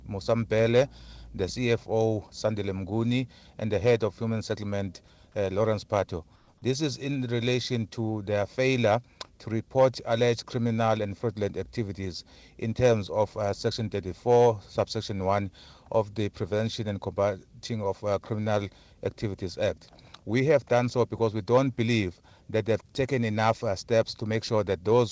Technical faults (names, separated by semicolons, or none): comfort noise in place of the background